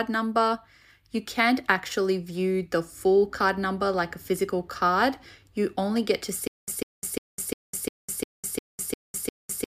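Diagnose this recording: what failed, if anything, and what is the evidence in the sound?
From 6.47 s to the end, there's a stutter with silent gaps: a 147 ms burst keeps repeating every 352 ms, with about 204 ms of dead silence between. It's likely a stalled playback stream replaying its last buffer on each retry, so the real audio's gone.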